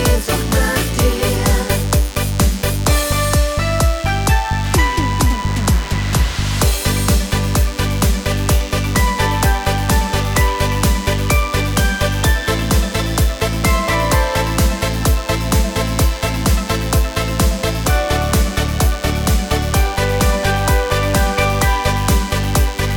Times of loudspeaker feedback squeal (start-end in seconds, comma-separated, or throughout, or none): none